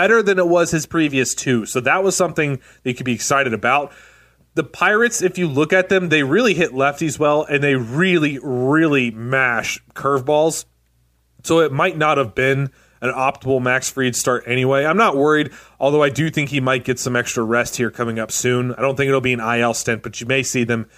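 No technical faults are audible.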